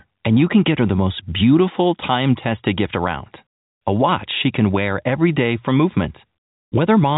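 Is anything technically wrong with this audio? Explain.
No, nothing stood out on listening to this speech, which comes through with the narrow band of an ordinary G.711 telephone line, topping out just below 4 kHz.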